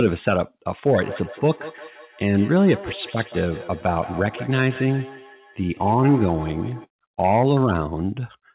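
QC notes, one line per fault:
0.92 to 6.88 s, feedback echo between two devices: the speech comes round again roughly every 150 ms, thinner and more ringing, at most about 15 dB below the speech. A second device replays the call into this microphone, and neither echo canceller removes the other's playback.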